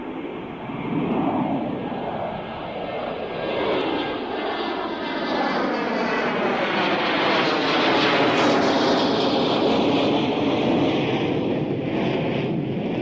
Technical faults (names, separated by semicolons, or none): none